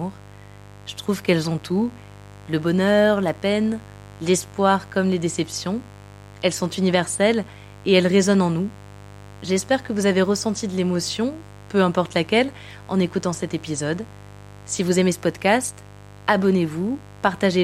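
Mains buzz runs under the speech from start to finish, around 20 dB below it. Switching spikes from 50 Hz power are leaking in, so harmonics stack up into the kilohertz range. That produces a raspy, edged buzz rather than the smooth, low tone of plain hum.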